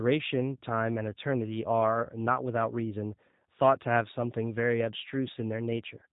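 Throughout, the speech shows plainly audible G.729 codec damage, rough and synthetic from pulse-based resynthesis; the spectrogram is empty above 3.8 kHz, fitting 8 kbit/s coding.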